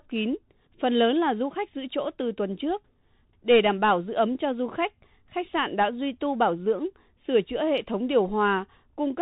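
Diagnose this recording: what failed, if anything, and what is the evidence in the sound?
The failure is at the codec stage: the Bluetooth CVSD headset codec runs throughout. The speech has nothing above 4 kHz, s sounds come out scratchy, loud bright passages distort, and a granular hiss sits underneath. This fits a 64 kbps one-bit delta stream whose adaptive step cannot keep pace.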